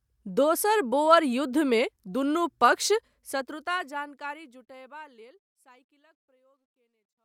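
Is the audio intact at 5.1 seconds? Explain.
Yes, the audio is intact at 5.1 seconds; the speech there is simply partway through the smooth fade-out, gently lower in level with no click or hard edge.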